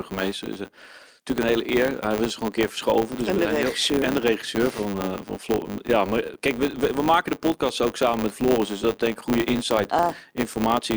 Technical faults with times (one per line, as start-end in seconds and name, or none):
0.00-10.96 filter restarted on every block